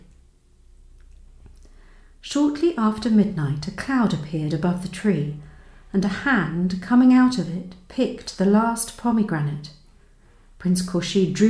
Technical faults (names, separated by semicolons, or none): none